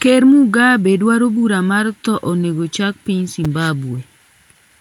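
Right after "thoo onego chak piny", at about 3.44 s, there's a quick case of chunks out of order: one roughly 5.8 ms slice of audio turns up one chunk late, after the slice that should follow it. Nothing goes missing, but the swap leaves a brief jumbled flicker.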